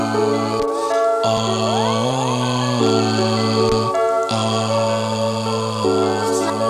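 At 2.86 to 2.89 s there is a single loud pop. It lasts about 26 ms and rises a few decibels above the surrounding sound. A sudden voltage step or pulse has entered the signal path, likely from a plug, a switch, static or a driver glitch. The stages after it shape that pulse into a short, sharp burst. It is heard as one hard pop laid over the sound, which continues underneath without a break.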